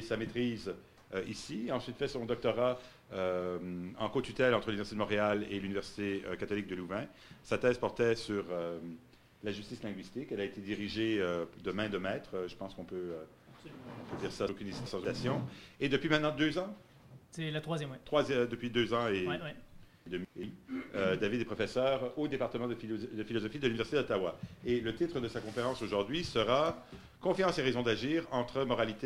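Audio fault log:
14.49–15.05 s and 20.06–20.43 s, chunks out of order: Two brief jumbled moments. A block of audio about 0.19 s long plays late, after material that should come after it. Nothing is missing, but the sequence is scrambled. Each reordering leaves three hard joins. The first block sounds about two blocks late, the second about one.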